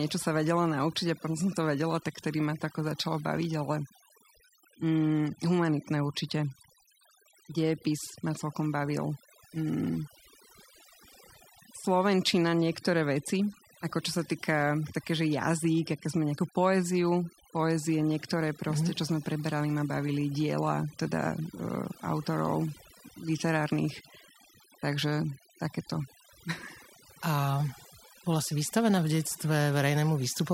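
From start to end, overdone noise removal strips bands near the noise floor. Background drops and breaks up into twinkling specks.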